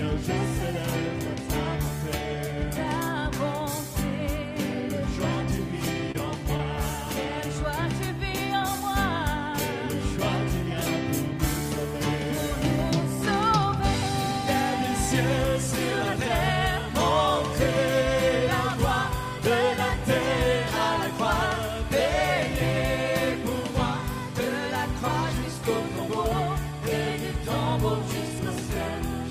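At 6.12 to 6.16 s there is a short stall from a late packet: the jitter buffer ran dry, so the receiver stretched the last sound for about 30 ms and then resumed exactly where it left off. The moment is held rather than skipped, with a slight buzz or dip, and the timing settles about 30 ms later.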